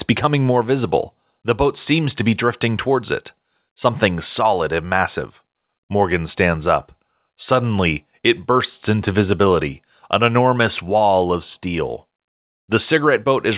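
No technical faults can be heard anywhere in the speech. The sound comes through a call path that stops at 4 kHz, which points to a narrowband telephone codec such as G.711 mu-law.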